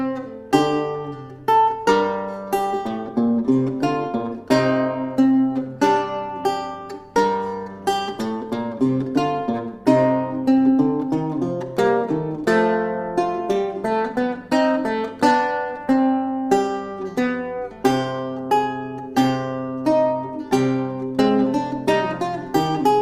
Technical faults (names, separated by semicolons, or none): none